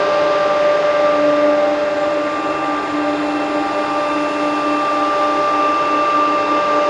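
No technical faults can be heard anywhere in the audio, with the signal staying steady and intact throughout.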